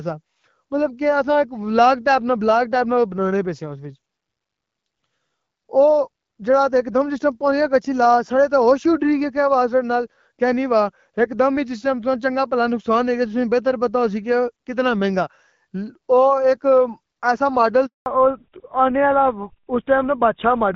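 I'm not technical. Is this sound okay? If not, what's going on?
No, there are two problems near the end. At 17.86 s there's a handover gap: the phone switched networks and the sound drops out completely for about 200 ms, until 18.06 s.

Right after that, from 18.06 s to the end, there's a fallback to narrowband. The call drops from HD Voice to an older codec, everything above 4 kHz disappears, and the voice sounds duller and rougher.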